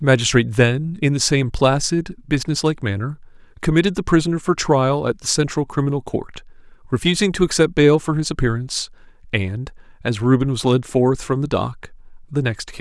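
No technical faults can be heard anywhere in the recording.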